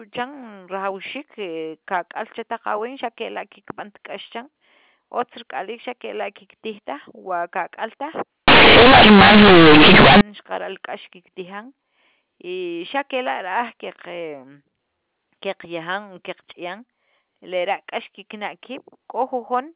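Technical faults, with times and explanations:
8.48–10.21 s, companded audio read as linear: A-law bytes are played as plain 8-bit samples without expansion, so quiet sound swings as wide as loud, giving loud buzzy distortion and noisy pauses. The waveform becomes a dense block swinging over about half its range, and the spectrogram shows a broadband smear to 4 kHz.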